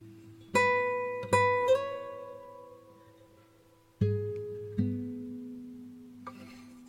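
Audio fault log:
Nothing to log here, this bit of music comes across without any fault worth noting.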